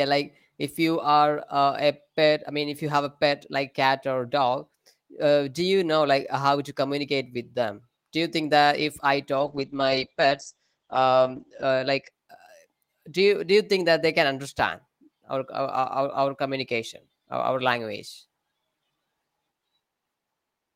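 From 9.38 s to 12.17 s there is a call bitrate drop. The connection's bandwidth estimate collapsed, so the encoder was forced onto a much smaller bit budget, and the sound fits a fall from about 32 kbps to about 9 kbps. The audible bandwidth shrinks from 20 kHz to 8 kHz, so the speech turns muffled and coarse, with the roughest stretch lasting 2.26 s before the fuller sound returns.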